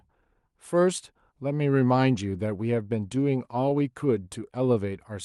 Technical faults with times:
4.23-4.75 jitter buffer slow-down

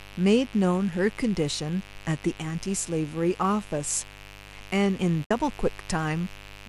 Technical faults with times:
0.00-6.68 mains buzz
5.25-5.31 AAC frame loss with muting

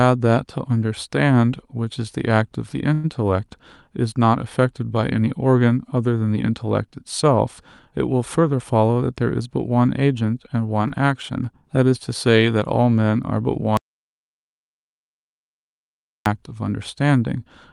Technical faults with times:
2.93-3.06 call audio freeze
8.43-9.48 jitter buffer speed-up
10.88-10.92 short concealed packet loss
13.77-16.26 audio dropout to silence

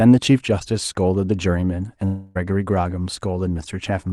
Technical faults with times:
2.05-2.37 long network dropout

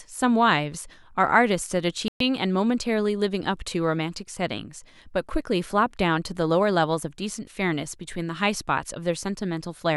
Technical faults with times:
2.08-2.21 Bluetooth dropout

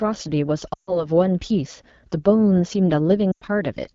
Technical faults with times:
0.00-3.95 AMR wideband (HD Voice) codec
0.73-1.07 lost AMR speech frames
3.31-3.44 lost AMR speech frames

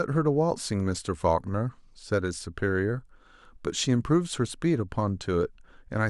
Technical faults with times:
none

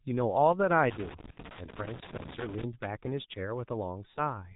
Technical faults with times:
0.00-4.55 G.723.1 codec
0.91-2.64 loose connector crackle
1.31-1.38 VoIP packet loss concealed by the speech codec

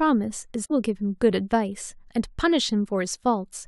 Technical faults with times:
0.64-0.71 damaged data in a compressed stream

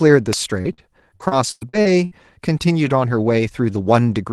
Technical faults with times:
0.33 electrical switching spike
0.61-0.68 short concealed packet loss
0.65-0.80 lost packet rebuilt from error correction
0.73-0.81 burst of packet loss
1.16-2.14 repeated packet loss (robotic sound)

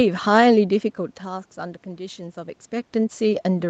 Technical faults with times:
none

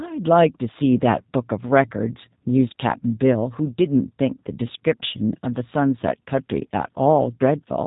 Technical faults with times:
0.00-7.86 G.729 codec

